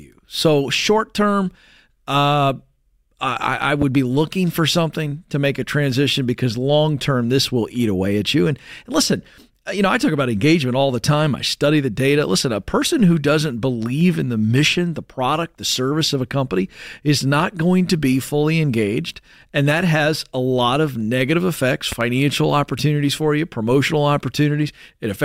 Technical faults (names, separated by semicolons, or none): loud pop